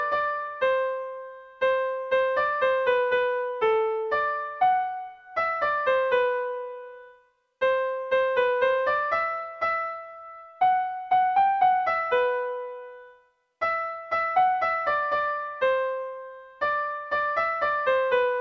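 There are no technical faults to describe in this clip.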